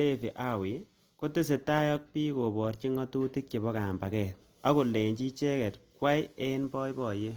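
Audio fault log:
Throughout, Opus compression: the speech sounds plainly rough and grainy, with upper bands filled by noise rather than left empty, while content still reaches about 20.2 kHz. This points to fullband music-mode coding short of bits, likely Opus near 24 kbps.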